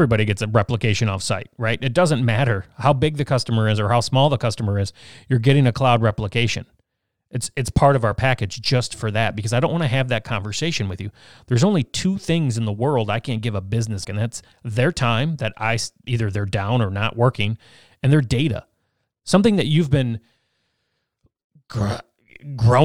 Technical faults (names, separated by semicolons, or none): damaged data in a compressed stream